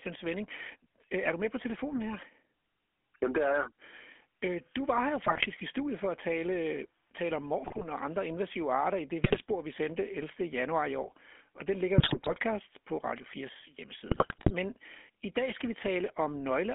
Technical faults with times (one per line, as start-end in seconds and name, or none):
0.00-16.74 GSM full-rate codec
5.26-5.47 GSM bit errors
7.64-7.85 GSM bit errors
9.24-9.40 GSM bit errors
11.98-12.40 GSM bit errors
14.08-14.51 GSM bit errors